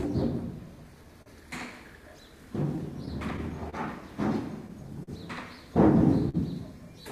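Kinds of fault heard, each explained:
Clock drift between sender and receiver: small timing hiccups recur at uneven intervals across the whole clip, where bits of sound are briefly repeated or held and the flow catches for an instant. The sender's clock runs roughly 3 percent slower than the receiver's, so the jitter buffer keeps draining. The receiver covers the shortfall by repeating short pieces.
Short stall from a late packet: at 1.22 s, 5.03 s and 6.29 s a sound is held for too long, by 41 ms, 39 ms and 44 ms, giving a brief buzz or dip before playback carries on. Each time a packet arrived late and the jitter buffer ran dry. The receiver stretched the last sound until the packet came in and then continued from where it had stopped. Nothing is lost, but the timing is pushed back each time.
Scattered short gaps: between 2.46 s and 3.74 s, about five tiny holes are patched over, each heard as a brief tick or smear in otherwise clear sound. 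Together they add up to about 70 ms, and none is longer than about 30 ms. Packets went missing or came late one at a time, and each hole was filled by carrying the last sound forward. No audio is dropped, and the patching covers about 5 percent of that stretch.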